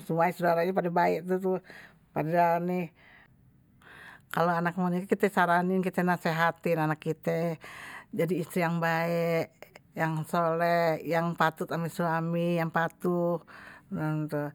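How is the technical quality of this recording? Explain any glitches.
Two brief clicks interrupt the speech, at 4.08 s and 11.11 s. Both are likely dropped samples: a fraction of a millisecond vanished from the stream, so the waveform leaps straight to a later value, producing a single sharp click.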